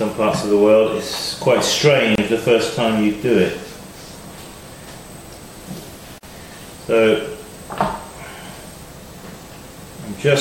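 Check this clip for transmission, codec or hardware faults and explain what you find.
Two short dropouts break the clip, both a gap at a join of encoded pieces. The first runs from 2.15 to 2.18 s, about 28 ms. The second runs from 6.18 to 6.23 s, about 49 ms. They fall 4 s apart. That spacing suggests the audio was encoded in 4-second pieces and joined untrimmed. Each piece keeps its encoder's leading delay and padded final frame, so silence sits at each seam. The sound cuts out, with smeared edges, then resumes where it stopped.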